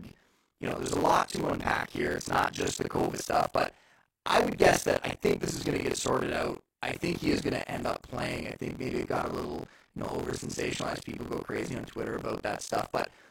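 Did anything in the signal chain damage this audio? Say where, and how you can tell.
Yes, at the driver or buffer stage: buffer tearing. A steady robotic buzz at 43.1 Hz rides the speech throughout. That rate fits a 1024-sample buffer. Writer and hardware pointers cross each period, so roughly 40 percent of every buffer replays audio about 50 ms old, hard-spliced at both ends.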